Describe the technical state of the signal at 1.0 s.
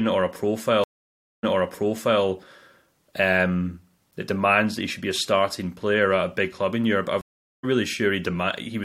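At 1.0 s the speech is inside a stream reconnect spanning 0.84 to 2.22 s. The connection dropped, leaving about 0.59 s of dead silence: a flat line on the waveform and an empty band on the spectrogram. Playback then restarts with a fresh decoder about 0.79 s earlier in the stream, so speech already heard is replayed. The restart fades up from low level, showing as a ramped waveform edge rather than a sharp onset.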